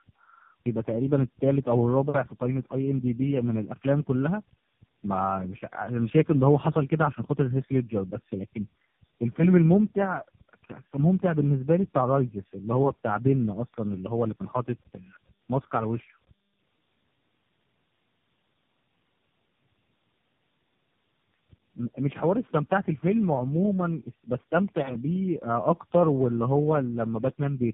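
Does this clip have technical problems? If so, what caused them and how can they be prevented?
Yes. Tandem speech coding is present throughout: the speech passed through AMR-NB, GSM full rate, then AMR-NB again, each coder re-encoding the last one's damage, leaving it rough, muffled and warbly. A spectrogram shows nothing above 3.5 kHz and smeared harmonics. Keeping one codec end to end, with transcoder-free operation, prevents it.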